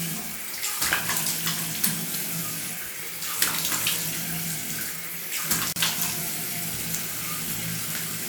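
At about 5.73 s there's a gap at a join of encoded pieces: a roughly 35 ms gap with smeared edges, then the sound picks up where it left off. Encoder start delay and end padding weren't trimmed when separately encoded chunks, apparently about 6 s long, were joined.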